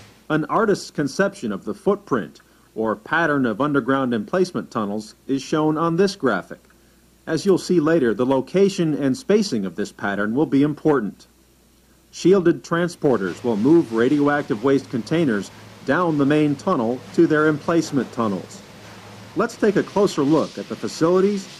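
No technical faults can be heard in this audio. Nothing in the recording points to a problem in how it was captured, processed or delivered.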